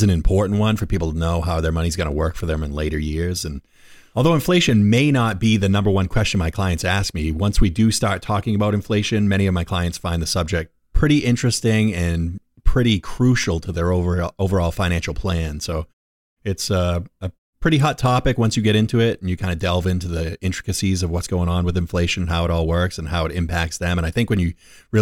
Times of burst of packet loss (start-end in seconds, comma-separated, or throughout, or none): none